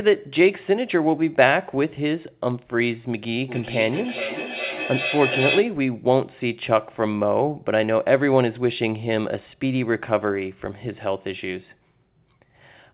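Feedback howl runs from 3.48 to 5.83 s in this speech recording: a tone around 3 kHz swells to about 6 dB below the talker, pulsing roughly every 0.4 s, as two devices on the same call recirculate sound, gaining level with each pass through a narrowband call path that carries nothing above 4 kHz, which points to G.711 coding.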